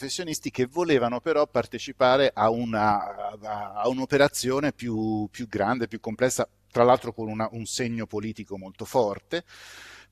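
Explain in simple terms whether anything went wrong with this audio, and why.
Nothing went wrong here.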